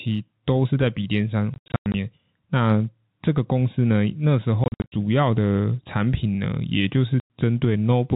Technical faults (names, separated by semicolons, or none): gain pumping; packet loss filled with silence